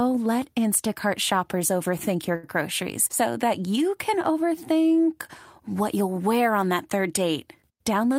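This is a speech recording with a short stall from a late packet between 2.35 and 2.46 s. A packet arrived late, the jitter buffer ran dry, and the receiver stretched the last sound for about 78 ms before resuming, so nothing is lost but everything after lands 78 ms later. On a spectrogram the harmonics run flat and unchanging across that span. The waveform shows near-identical repeated cycles.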